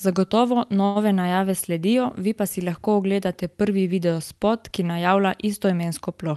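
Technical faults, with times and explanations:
0.85–0.97 s short stall from a late packet: the buffer ran dry, so sound is held for 100 ms, showing frozen spectrogram streaks and repeated waveform cycles.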